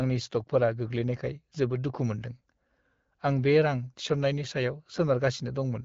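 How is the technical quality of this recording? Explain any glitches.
No technical faults can be heard in this recording.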